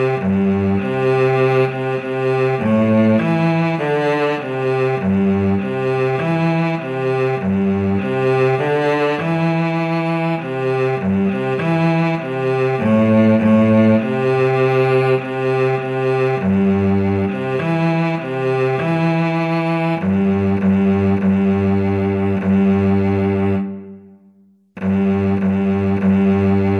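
No technical faults are audible anywhere in the recording.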